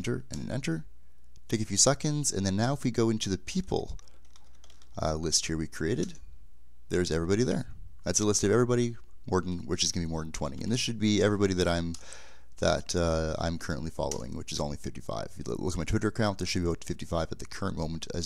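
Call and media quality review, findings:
No technical faults found anywhere in the signal; levels, continuity and timing hold steady throughout.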